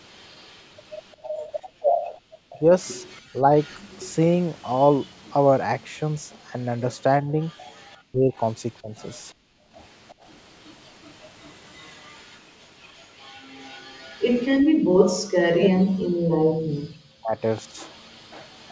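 From the start until 15.79 s there is an echo leak: a faint delayed copy of the speech trails by about 353 ms, roughly 30 dB below the direct voice. This is likely a speakerphone's echo canceller failing to remove what its microphone picked up from the loudspeaker and sending it back. On a spectrogram the harmonic striations of each syllable reappear about a third of a second later as a pale, shifted ghost.

Within that stretch the background is gated by the echo canceller three times: 1.17 to 2.32 s (about a second of dips in all), 9.35 to 9.72 s, and 14.61 to 14.84 s. Each time the far-end loudspeaker plays, the canceller clamps the microphone down by about 40 dB, so room tone drops out abruptly and then returns. The waveform shows the noise floor collapsing into near-flat gaps, and the spectrogram shows blank vertical bands.

Speech is suppressed in double talk at 2.6 to 3.51 s, 7.23 to 8.95 s and 15.12 to 17.37 s, likely because both sides spoke at once and the canceller turned down the local talker along with the echo. 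The first is mild, a dip of around 15 dB over a fifth of a second. The second cuts in deeper, near 40 dB, across about half a second. The third pulls the voice down by about 40 dB for roughly two seconds. In the waveform the speech envelope is notched or hollowed out, and the spectrogram shows harmonics fading, in the call audio that already has nothing above 8 kHz.

From 17.39 s to the end at 18.72 s the echo leak returns, still trailing by 353 ms but weaker, roughly 35 dB down, as a faint repeated smear.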